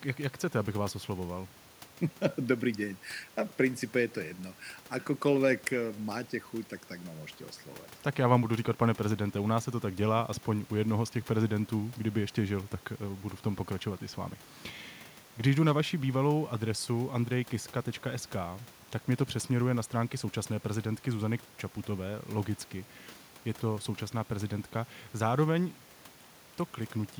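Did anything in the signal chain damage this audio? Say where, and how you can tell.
No, nothing in the signal chain stood out on listening, and the only thing heard besides the speech is the room's own background noise, which sits about 28 dB below it.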